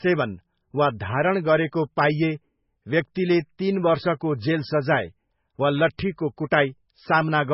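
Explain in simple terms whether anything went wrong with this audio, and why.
Throughout the speech, the sound is dull and watery, with nothing above 5.6 kHz. The likely cause is heavy MP3 compression discarding treble and faint detail.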